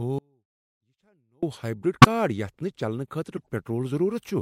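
The signal path likely lost its input between 0.19 and 1.43 s while the rest of the chain stayed live, an audio dropout to a faint residue. For about 1.2 seconds the speech cuts out abruptly, leaving only a faint sound, roughly 35 dB below normal level, before it snaps back.

Later, damaged compressed data reached the decoder and was played anyway. This corrupt frame decoded output spreads energy into the wrong frequencies across a few frames at 2.01 to 2.06 s and again at 3.37 to 3.47 s, heard as short chirpy bursts of noise cutting across the speech.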